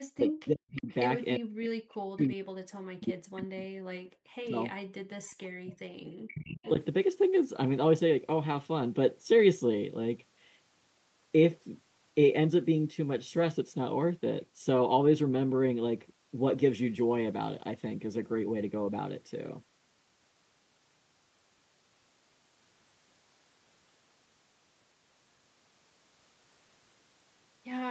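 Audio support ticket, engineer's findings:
Speech suppressed in double talk at 0.00–0.89 s, 1.38–3.67 s, 3.86–5.73 s and 6.30–6.65 s. Talker level dips hard in pieces, deepest about 40 dB down, roughly 0.7 s, 2 s, 1.5 s and 0.4 s affected per span. Likely cause: near-end echo canceller unable to separate near talker from loudspeaker echo during overlap, attenuating both.

Echo leak at 0.76–0.95 s, 5.26–5.32 s, 6.27–6.31 s and 6.63–6.70 s. Short delayed scraps of speech. The first two sit 362 ms behind the source, at about 20 dB and about 40 dB below speech. The last two sit 438 ms behind, at about 25 dB and about 15 dB below. Likely cause: loudspeaker-side echo canceller leaving residual echo, returned through the Opus call path, which caps the band at 8 kHz.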